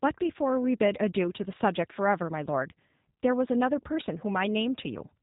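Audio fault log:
throughout G.729 codec: the speech has passed through a low-rate voice codec that points to G.729 at around 8 kbit/s. Rather than sending the waveform, it sends a vocal tract filter, a pitch predictor and a handful of pulses for every 10 ms frame, and the far end rebuilds the speech from those. Nothing above 4 kHz survives, so the sound is dull and boxy, and the damage is plainly audible as a rough, slightly synthetic buzz on the voice.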